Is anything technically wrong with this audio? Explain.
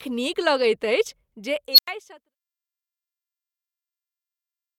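Yes. There is an unstable filter fault from 1.72 to 1.88 s. A recursive filter received bad coefficients, so its output fed back on itself and grew without limit. A tone around 4 kHz swells over about 59 ms into a loud squeal. The numbers then overflow and the output drops out for about 93 ms until the filter resets. The intended fade-out, running from roughly 1 s to 2.36 s, stays smooth around this.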